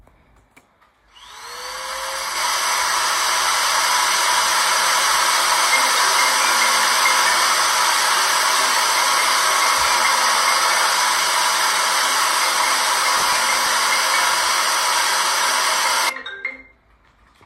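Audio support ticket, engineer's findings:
Skip ahead, 2.35–2.37 s: audio dropped while later packets waited. Playback jumps forward about a second, the two sides joined almost directly with no gap.

Processor overload crackle, 13.17–13.67 s: CPU missed repeated buffer deadlines, each miss replaying stale audio with hard edges. This is heard as gritty crackle, which fits roughly ten missed 5 ms buffers.

Jitter buffer speed-up, 16.13–17.41 s: buffer over target, receiver trimming short pitch-period pieces, about 150 ms in total. Sound runs at 111% speed with unchanged pitch and feels hurried.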